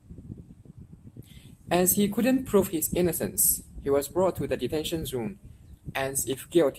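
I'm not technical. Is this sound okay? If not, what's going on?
Yes, no faults to hear.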